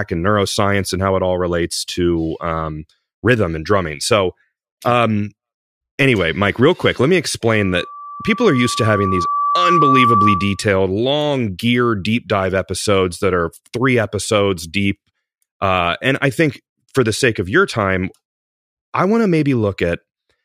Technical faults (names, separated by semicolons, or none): loudspeaker feedback squeal